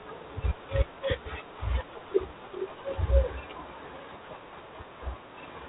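From start to finish the speech carries G.726 ADPCM damage. Each sample is coded as a coarse step away from a running prediction, and with so few steps the quantising error becomes a harsh, rasping hiss that swells on louder syllables and drops back in pauses, which fits the 24 kbit/s mode. On a spectrogram everything stops at a flat ceiling near 4 kHz, with grainy noise filling the band under each syllable. The waveform shows fuzz riding on the peaks.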